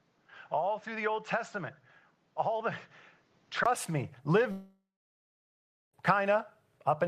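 Speech in which the first 3.66 s sound dull and boxy, with nothing above 7.6 kHz, a level about 5 dB lower and a different noise floor roughly 35 dB down. A 20 ms silence at 3.66 s marks the return, pointing to an input switched to a poorer device. A mere bandwidth drop wouldn't also change level and noise. From 4.51 to 5.94 s about 1.4 s is missing: the last sound trails off as a fading buzz, then roughly 1.1 s of silence, and speech resumes further on. That points to a long network dropout, and its length rules out brief packet loss.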